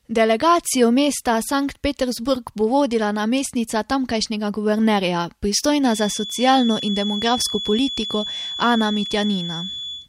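From 5.78 s to the end, a feedback whistle at 3.4 kHz sits somewhat below the speech, likely from a loudspeaker-to-microphone loop held at the edge of feedback. Its slow swelling and fading in level distinguishes it from a steady electrical tone.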